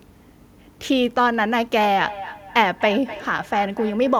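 From 1.8 s, feedback echo between two devices: another device replays the call into the microphone, so speech returns about every third of a second, about 14 dB quieter.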